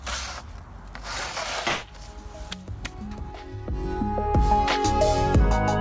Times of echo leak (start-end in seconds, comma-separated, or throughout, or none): none